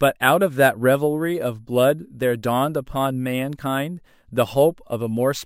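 Imaging from sample-and-hold upsampling runs throughout this speech clip: samples were simply repeated with no smoothing filter, mirroring the spectrum into a metallic fizz from 11.0 to 22.1 kHz at about −25 dB, which fits a 22 kHz original rate.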